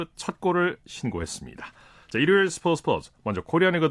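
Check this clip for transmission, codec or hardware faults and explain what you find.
The speech signal holds steady throughout, with nothing audible that points to a problem in how it was captured, encoded or carried.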